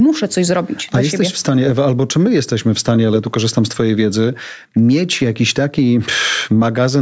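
A speech recording with gain pumping throughout, with the level swinging around 10 dB. Loud and quiet passages sit unnaturally close together, giving a squashed sound, likely from input gain set far too high and a fast limiter clamping it down. The call-style microphone processing trims the lowest bass and leaves nothing above 8 kHz.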